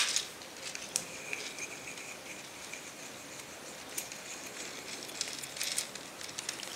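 No technical faults can be heard anywhere in the audio; the signal stays intact and consistent throughout.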